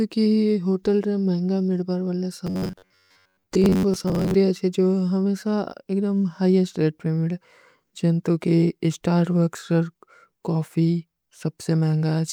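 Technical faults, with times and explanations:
2.47 to 4.34 s, robotic sound from repeated short buffers: the speech becomes a rigid metallic buzz near 94 Hz, with most of the real audio skipped. The likely cause is late-arriving audio being filled by looping a segment of about 10.7 ms.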